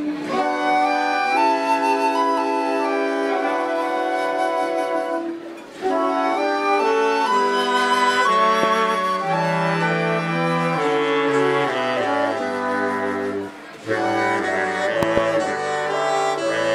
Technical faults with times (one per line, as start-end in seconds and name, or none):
8.63-8.65 loud pop
15.03-15.20 loud pop